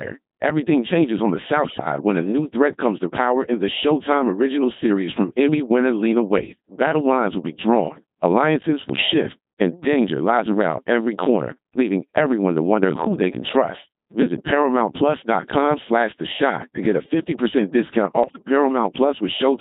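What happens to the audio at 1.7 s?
At 1.7 s the audio is inside a burst of bit errors on digital voice radio, running from about 1.64 to 1.86 s. Flipped bits reached a very low-rate vocoder, where each bit helps set a whole frame's pitch, level, voicing or spectral shape. The errors therefore produce abrupt jumps in pitch, loudness and tone colour, and the speech briefly breaks into warbling, bleepy, robotic gibberish. The span of roughly 0.22 s points to around eight corrupted frames, with an error rate of several percent.

Underneath the burst, and throughout the clip, the speech is carried by the Codec 2 vocoder, and its heavy damage suggests the 2.4 kbit/s mode. Codec 2 does not keep the waveform. It sends only pitch, voicing, energy and a spectral envelope, and the decoder rebuilds the speech from sine waves. The result is the buzzy, robotic, synthetic quality heard before and after the error burst.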